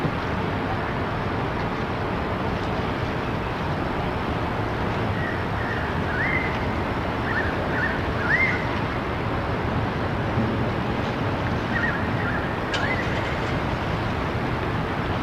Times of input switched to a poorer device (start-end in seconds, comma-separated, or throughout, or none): none